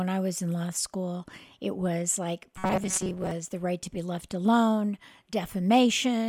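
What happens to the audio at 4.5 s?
Nothing goes wrong at 4.5 s; the speech runs through that moment intact, with no dropout, click or distortion.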